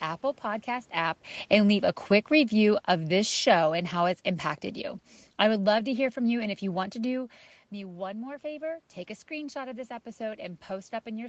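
Automatic gain falling runs from 0.95 to 4.26 s: the gain control judges the input too loud or its background noise too strong and eases its gain down by about 5 dB, so the speech and room noise sink together until just before "impacted you I would".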